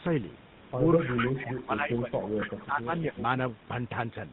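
The whole clip carries the GSM full-rate codec, heard at 13 kbps. The damage is plainly audible. The voice has a buzzy, gravelly roughness. Nothing above 4 kHz survives. The coarse pulse excitation gives the grit.

From 0.98 to 1.29 s, a delayed copy of the voice appears, 252 ms behind. It sits only about 5 dB below the speech. This is an echo leak. A loudspeaker echo likely slipped past the canceller.

From 1.04 to 2.13 s, the voice dips in and out. It drops by roughly 15 dB at worst, over about a second in total. This is speech suppressed in double talk. Both sides likely spoke at once, and the canceller turned down its own talker along with the echo.

The echo leak returns from 1.95 to 2.64 s. It has the same 252 ms delay and is again about 5 dB down.

From 2.40 to 2.43 s, one lost GSM frame, 20 ms long, is patched with the previous frame. It leaves a brief metallic, held ring.

Speech suppressed in double talk hits again from 2.56 to 2.92 s. 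It is deeper this time, around 20 dB, over about 400 ms. A short dip of about 15 dB follows from 3.10 to 3.16 s.

A faint final scrap of echo leak comes at 3.18 to 3.22 s. It is about 15 dB down, with the same 252 ms lag.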